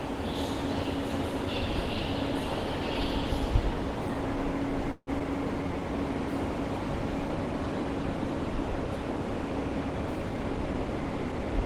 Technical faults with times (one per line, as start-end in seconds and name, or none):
4.91-5.10 call audio freeze
5.19-5.23 short concealed packet loss
5.62-5.81 jitter buffer slow-down
10.29-11.53 jitter buffer speed-up